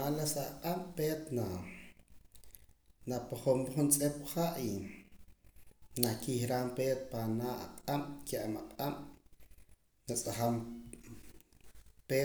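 Nothing technical goes wrong anywhere in this speech recording, so there's no fault to point out.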